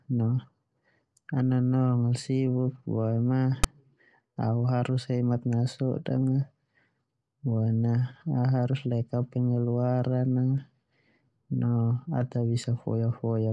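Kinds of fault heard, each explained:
File tags played as audio: text metadata decoded as samples, a hard-edged one-sided rasp at 3.64 s, showing as a brief broadband stripe and offset waveform block.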